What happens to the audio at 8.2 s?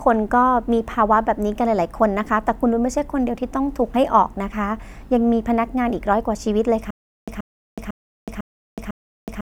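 At 8.2 s the audio is in a stutter with silent gaps, from 6.91 s to the end. A 130 ms fragment recurs every 500 ms between 370 ms silences, likely a stalled stream retrying. Waveform and spectrogram show identical blocks between flat, empty stretches.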